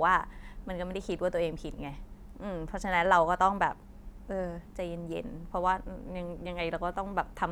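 Speech recording with no audible technical faults anywhere in it.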